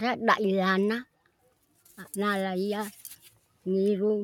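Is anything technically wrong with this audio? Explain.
Yes. Sound cut by the noise suppressor appears from 1.05 to 1.88 s and from 3.23 to 3.65 s. The suppressor misjudged steady or fading parts as noise and pulled them down by up to about 12 dB, for roughly 0.5 s the first time and 0.4 s the second. Sustained portions sag and decays end early.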